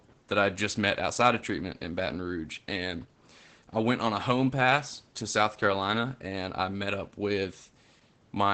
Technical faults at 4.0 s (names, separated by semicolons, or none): Opus voice compression